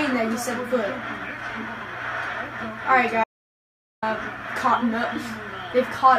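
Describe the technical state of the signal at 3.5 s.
At 3.5 s the sound is simply gone: it cuts off abruptly at 3.24 s and returns mid-flow at 4.02 s, leaving about 0.78 s of dead silence with no room tone. This is an audio dropout to silence, likely from the input briefly disconnecting or muting while recording continued writing silence.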